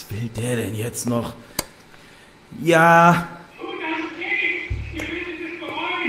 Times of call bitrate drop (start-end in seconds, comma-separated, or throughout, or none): 3.90-6.08